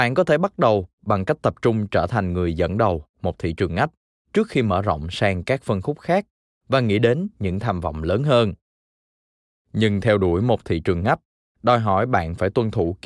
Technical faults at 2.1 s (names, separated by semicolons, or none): none